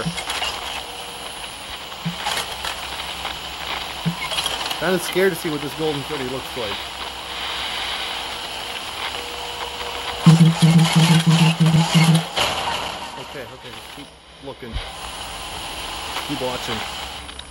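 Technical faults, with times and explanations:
7.96 s and 11.76 s, dropped buffer (overrun): the software likely failed to collect a block of samples before the hardware overwrote it, losing around 10 ms each time. With no gap left, the sound jumps ahead abruptly.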